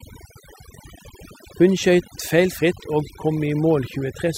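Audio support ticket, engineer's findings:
Overdone noise removal, present for the whole speech clip. Background dropped and broken up into twinkling specks. Denoiser set too aggressive: bands near its noise estimate gated off, taking quiet voice detail too. Spectrogram: isolated flickering bins, holes between harmonics.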